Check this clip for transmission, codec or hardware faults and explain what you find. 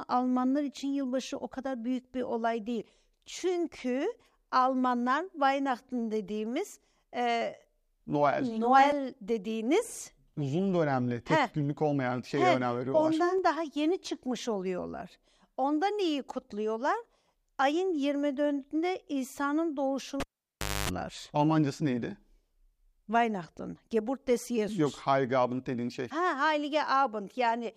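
One hardware fault stands out: the cable is pulled and plugged in again between 20.20 and 20.89 s. A pop marks the plug leaving the socket. The signal then falls to near silence for about 640 ms. As the plug goes back in, only the tip touches first, picking up roughly 254 ms of 50 Hz mains buzz, and a second pop brings the speech back. Unlike a network dropout, which cuts cleanly without transients, this one has pops at both ends and hum in between.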